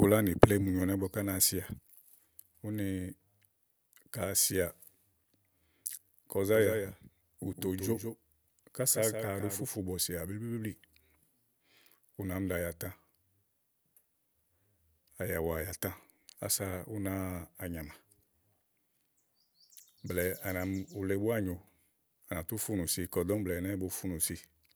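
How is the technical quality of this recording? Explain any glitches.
One glitch stands out: from 6.55 to 9.65 s a doubled audio track appears. A second copy trails about 150 ms behind, a few dB quieter, likely from a slower capture path. Unlike room echo, it stays dry and undecayed, and it starts and stops abruptly.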